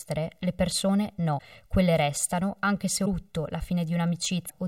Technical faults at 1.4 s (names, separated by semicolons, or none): channel delay (comb filtering); broken MP3 bit reservoir